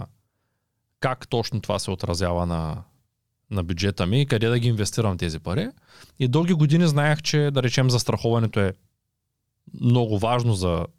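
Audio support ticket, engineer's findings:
No faults found on listening.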